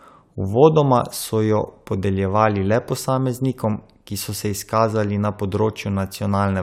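No technical faults can be heard in this speech recording.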